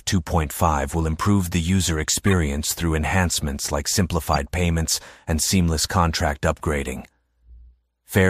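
At 2.27 to 2.33 s and again at 4.34 to 4.38 s, a corrupt frame decoded fault produces brief chirping noise bursts. Damaged compressed data was played regardless, misplacing spectral energy across several frames first, then a couple, peaking near -10 and -15 dBFS.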